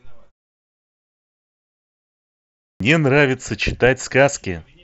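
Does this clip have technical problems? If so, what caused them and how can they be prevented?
Yes. A clipped start after a pause occurs at 2.59 s. About 0.21 s of speech is swallowed, until 2.80 s. The output device slept through the silence and woke late. To prevent this, keep the output stream active or disable power saving on the device.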